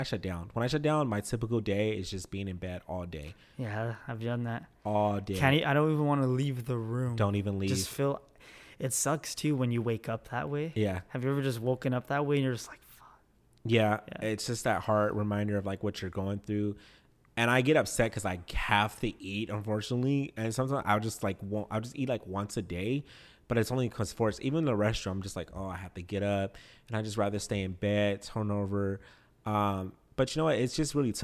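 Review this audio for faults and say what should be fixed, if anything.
No faults turn up in this audio, so nothing needs to be fixed.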